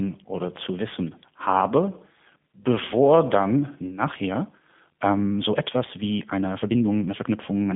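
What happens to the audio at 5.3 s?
At 5.3 s the audio sits inside a time-stretched section that runs from 4.02 s, just after "bevor dann", to the end of the clip. Software likely squeezed this stretch to play at 1.5 times the speed by discarding short slices while holding pitch, so the pace lurches forward and the sound turns rushed at unchanged pitch. Underneath, the whole clip passes through the G.729 codec at 8 kbit/s, rebuilding the speech from a tract filter and sparse pulses in a 150 Hz to 3.5 kHz band with nothing above 3.7 kHz, which leaves it muffled, rough and slightly synthetic.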